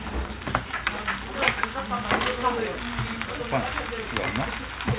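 From 3.95 s to the end at 4.98 s, low bit depth with dither sets in. Only about 7 bits remain, and dither turns the rounding error into a steady, even hiss roughly 15 dB below the sound. On a spectrogram it shows as a flat noise floor up to the 4 kHz band edge.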